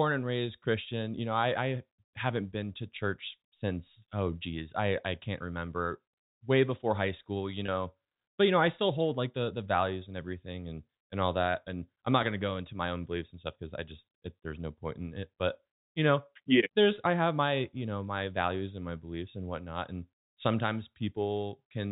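At 7.66 to 7.68 s, just after "before high school you", the sound briefly catches on a slightly held, buzzy tone before carrying on. This is packet loss with pitch repetition. About 20 ms of audio went missing, which fits a single lost packet, and the receiver filled the hole by repeating the last pitch period it had. Because the gap is so short, the repeated cycle never has time to fade toward silence. The clip is carried over G.711 telephone coding, so it stays narrowband throughout.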